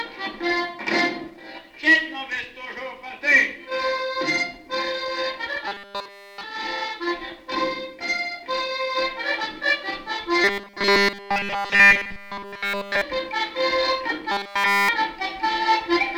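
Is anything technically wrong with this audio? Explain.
Yes. Three stretches, from 5.68 to 6.44 s, 10.44 to 13.02 s and 14.32 to 14.89 s, turn rigid and metallic, with a steady 200 Hz buzz that follows the shape of the sound only loosely. This is robotic sound from repeated short buffers. The likely cause is new audio arriving too seldom, so playback loops a segment of about 5 ms over and over while essentially all the real audio in those spans is skipped.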